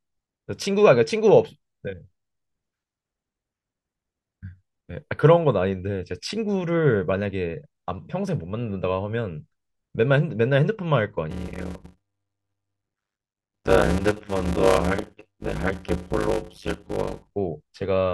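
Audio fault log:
11.30–17.31 s block size mismatch (padded): each block written is shorter than the block read, which fits 256-sample blocks padded with zeros. The gaps produce a 100 Hz buzz, and the speech runs at 0.533 times normal speed while keeping its timbre.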